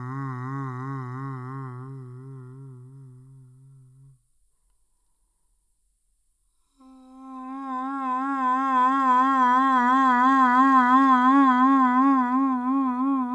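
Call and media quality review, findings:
Wrong sample rate, whole clip: music runs at half speed and an octave low (-12 semitones). Points to the playback clock, consistent with 44.1 kHz material played at about 22 kHz without conversion. Unlike a pitch shift or time-stretch, tempo and pitch fall together.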